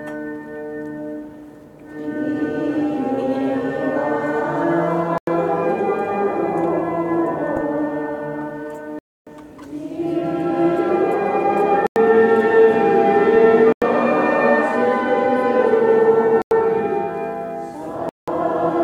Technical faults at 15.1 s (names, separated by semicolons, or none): corrupt FLAC frame